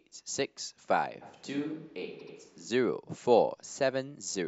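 A speech clip whose sound turns suddenly roomy and hollow from 1.23 s to 2.68 s, thinner in the bass, about 5 dB quieter and with room noise rising to roughly 30 dB below the voice. The likely cause is a switch to a distant microphone while the close one dropped out, with an equally abrupt return. Inside that stretch, from 2.18 s to 2.34 s, a stutter replays the same short slice of sound. These are repeated frames: a 78.4 ms block of compressed audio was played twice more, lengthening the clip by 156.7 ms.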